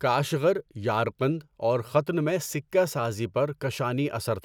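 No technical faults detected.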